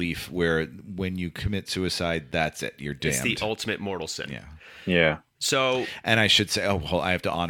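A speech recording with nothing technically wrong with it.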